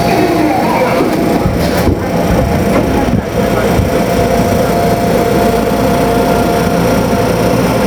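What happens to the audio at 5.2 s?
At 5.2 s you're hearing the gain pumping that runs through the whole clip. The level swings by around 10 dB, dropping the moment something loud comes in, so loud and soft parts sit unnaturally close and everything feels squashed. That's likely from the input gain being set far too hot, with a fast limiter or compressor clamping down on each loud hit and then letting go.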